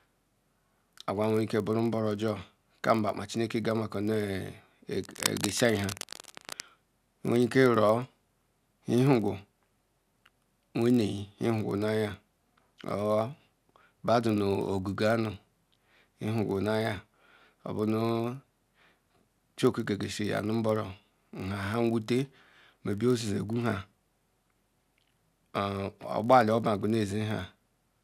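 A filter restarted on every block runs through the whole clip. The filter loses its memory at each block boundary and begins again from silence, leaving a small transient each time. This produces a buzz at about 46.9 Hz, which fits a 1024-sample buffer, that rises and falls with the speech level.

Cable scratch noise appears from 5.01 to 6.61 s as dense, uneven bursts of scratching and rustling over the speech, roughly 10 dB below it. The likely cause is a worn cable or connector being moved, making its contact resistance jump rapidly.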